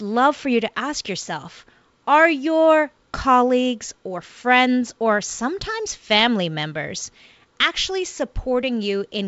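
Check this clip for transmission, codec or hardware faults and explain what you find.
Nothing stood out on listening to this speech clip.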